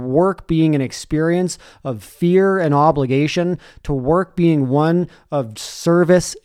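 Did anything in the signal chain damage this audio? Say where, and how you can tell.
No, nothing along the way seems to have harmed this speech recording, so there's nothing here to trace back to a particular stage.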